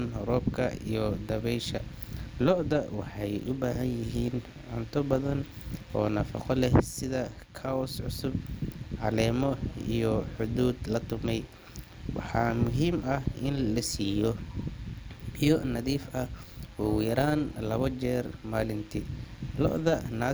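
From start to finish the speech carries overlap-add ripple: the frames were rejoined with an overlap that doesn't sum to steady gain, so level dips by about 6 dB around 150 times a second, giving a metallic buzz with extra tones around each note over everything.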